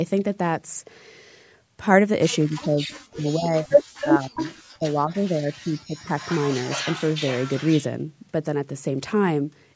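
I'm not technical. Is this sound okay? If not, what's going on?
No, there are two problems, both typical of a call where someone is on a speakerphone.

The first is speech suppressed in double talk. At 2.46 to 2.93, 3.09 to 3.81, 4.04 to 4.40 and 4.73 to 6.14 seconds, the voice suddenly drops away, sometimes almost to nothing, then comes back. That's likely the call's echo canceller getting confused while both people talk at once and turning everything down to be safe, including the person you want to hear.

The second is echo leak. At 2.92 to 2.96, 4.00 to 4.06, 4.36 to 4.55, and for a longer stretch from 6.17 to 7.86 seconds, you can hear a second copy of the voice trailing about a fifth of a second behind. The far end's speaker sound likely got back into its microphone and wasn't fully cleaned out, so it was sent back down the line.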